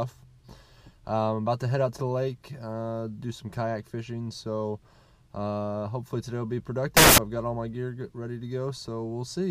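Samples built from the wrong bytes burst out as loud, harsh broadband noise from 6.97 to 7.18 s, where misassembled bytes turn low bits into large values, showing as broadband smear on the spectrogram and a dense block on the waveform.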